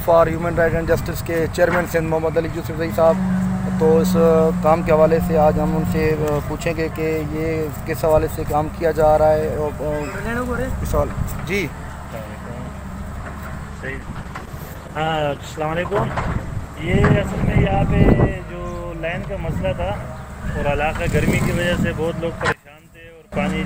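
A call bitrate drop runs from 13.71 to 17.87 s: the audio turns coarse and watery, and the top end dulls as high frequencies are cut. This fits the encoder dropping from about 64 kbps to about 13 kbps, staying at its lowest for roughly 4.1 s before recovering. From 22.52 to 23.32 s the level collapses by about 22 dB into a faint remnant, likely one channel inverted, so the shared centre content cancels when the stereo channels sum to mono.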